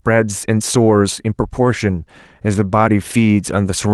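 No technical faults can be heard in this speech.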